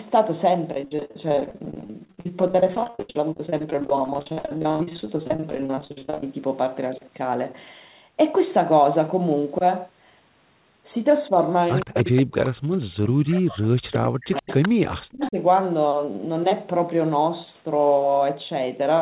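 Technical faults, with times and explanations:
0.73–6.34 s: repeated packet loss (robotic sound). Over 100 short gaps, none longer than 73 ms, leave the speech choppy. Each hole is filled by stretching the last sound, so about 42 percent of this stretch is patched rather than real. Pieces are missing between patches.
11.80–12.77 s, 13.29–13.41 s, 14.36–14.69 s and 15.22–15.30 s: echo leak. A copy of the far side's voice returns 122 ms late, from about 20 dB down to about 10 dB below the speech. The likely cause is a loudspeaker echo canceller letting residue through.
11.85–15.37 s: speech suppressed in double talk. The talker's voice dips and cuts out in pieces, at worst by about 40 dB, for roughly three seconds in total. Both sides are talking at once here. The likely cause is the echo canceller turning everything down when it cannot separate them.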